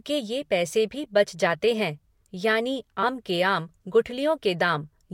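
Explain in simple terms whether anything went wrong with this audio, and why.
Yes, something went wrong. At 3.02 s, just after "बच जाते है यानि" and before "के आम", the speech jumps ahead. This is compressed frames skipped. About a tenth of a second is missing, which points to roughly four lost frames.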